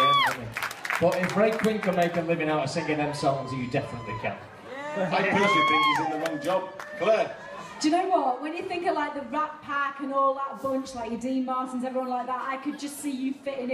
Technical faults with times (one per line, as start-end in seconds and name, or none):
none